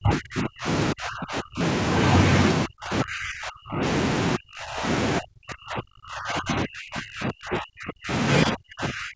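Speech whose level repeatedly collapses by about 35–40 dB at 0.00–0.67, 0.93–1.61, 2.66–3.82, 4.37–4.85, 5.19–8.11 and 8.45–9.15 s. This is likely speech suppressed in double talk: an echo canceller, unable to separate near talker from far-end echo, pulled both down.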